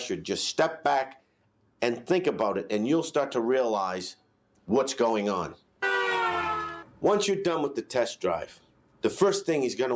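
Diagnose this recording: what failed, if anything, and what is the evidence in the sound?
The call processing chain left a speech-oriented noise suppressor running on non-speech sound, which behaves as a noise suppressor applied to music or sounds. It treats sustained tones and ambience as noise, so the level pumps by about 5 dB throughout, within a band that ends near 8 kHz.

At five points the noise suppressor turns the sound down: 1.18 to 1.81 s, 4.15 to 4.68 s, 5.55 to 5.82 s, 6.84 to 7.03 s and 8.53 to 9.03 s. Held or decaying material sinks by about 12 dB while the suppressor misjudges it as noise.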